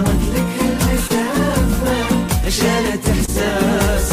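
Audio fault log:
1.07–1.11 s and 3.25–3.29 s, short concealed packet loss: about 20 ms of audio arrived too late each time, so the receiver bridged the gap by stretching out the sound just before it and blending back into the real signal, which leaves a quick smear instead of a dropout.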